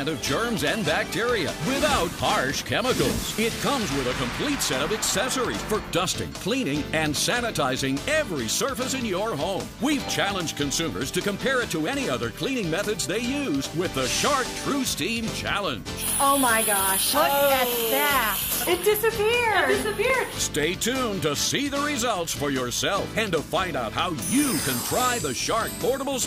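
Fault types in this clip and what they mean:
CD scratch ticks: Seven regular ticks, about four a second, run from 19.30 to 20.90 s, the longest around 2 ms. A disc blemish ruins more data than error correction can rebuild on each rotation, so the player interpolates or mutes those samples.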